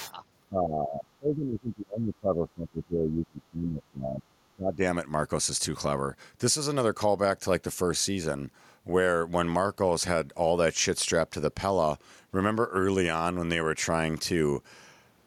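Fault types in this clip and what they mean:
Other side's voice leaking through: A second voice sits under the talker during the first 0.13 s, about 15 dB below the main speech. It is a short scrap, not a long stretch. This is likely the far end's audio, played on the talker's loudspeaker and picked up again by the microphone. The echo canceller did not strip all of it out. So a small piece of the other side slips into the signal.
Speech suppressed in double talk: The talker's level drops sharply from 0.49 s to 4.34 s. At its deepest, the drop is around 30 dB. A second, shorter dip follows from 4.55 s to 4.82 s and reaches roughly 25 dB. Together they affect about 4.3 seconds of the talker. The likely cause is both sides talking at once. The echo canceller could not tell its own talker from the returning echo, so it turned both down.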